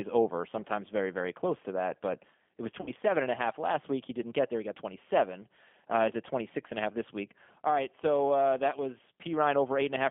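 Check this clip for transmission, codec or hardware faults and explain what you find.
Two faults are present: low-bitrate codec coding across the whole clip, and one concealed packet-loss gap.

G.729 codec, throughout: the speech was rebuilt from a vocal tract filter, a pitch predictor and a few pulses per frame, which fits G.729A at 8 kbit/s. Band-limited to roughly 200 Hz to 3.4 kHz, the speech sounds thin, rough and plainly synthetic.

VoIP packet loss concealed by the speech codec, 2.81 to 2.91 s, between "it was" and "and a half last": about 60 ms of audio went missing, which fits two lost packets. The decoder stretched its last pitch and filter with falling gain, leaving a fading smear that lingers weakly after packets resume.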